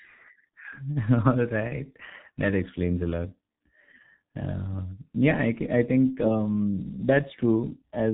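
Throughout, heavy G.723.1 codec damage leaves the speech muffled and hoarse. Unlike simple low-pass filtering, its slow 30 ms frame updates also smear consonants.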